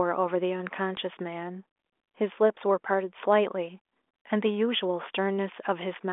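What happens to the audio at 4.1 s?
Nothing goes wrong at 4.1 s: the speech passes through intact, carried by the 40 kbit/s G.726 ADPCM telephone path with its band ending around 3.7 kHz and no more than faint coding roughness.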